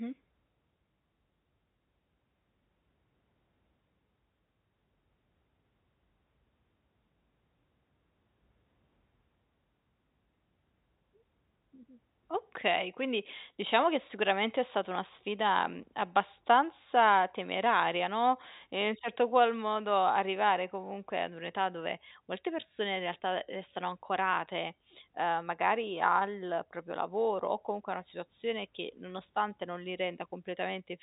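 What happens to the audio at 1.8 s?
Nothing goes wrong at 1.8 s: the speech there comes through intact, with only the narrow, telephone-band character of its G.711 coding.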